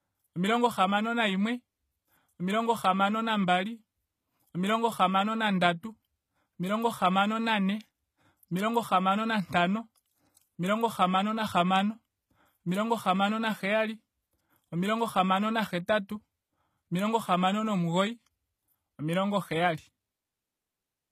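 A speech recording in which codec damage is plainly audible throughout: the treble sounds synthesized rather than natural, and nothing is present above 14.9 kHz. The likely cause is HE-AAC compression at a low bitrate, around 20 kbps, rebuilding the upper spectrum by copying lower bands upward.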